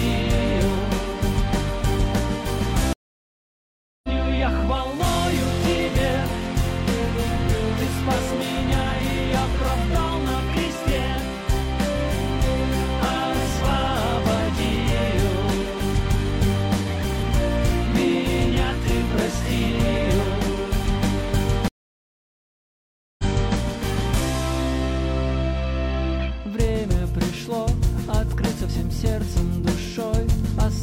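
Stream reconnects at 2.93 s and 21.68 s: the connection dropped, playback went silent, and a fresh decoder restarted mid-stream. The first 1.1 s gap resumes about a second and a half later; the second, 1.5 s long, resumes 0.37 s earlier, repeating audio.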